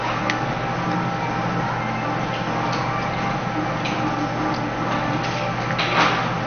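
All the way through, the sound is dull with a gurgling, granular grit and nothing above 6.5 kHz, likely MP2 compression starved of bits, fitting roughly 48 kbps.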